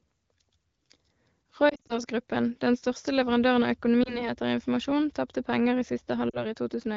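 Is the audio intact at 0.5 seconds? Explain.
Yes, the audio is intact at 0.5 seconds.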